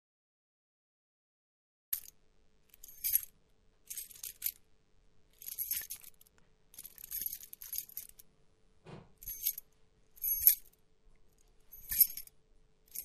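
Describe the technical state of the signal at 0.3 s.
At 0.3 s there is nothing to hear: the signal is dead digital silence, part of a blank stretch running from 0.0 to 1.93 s. This is a cut-off start. Capture or streaming began late, so nothing was recorded for that opening span, and at 1.93 s the audio jumps straight in partway through a sound, with no natural attack or fade-in leading up to it.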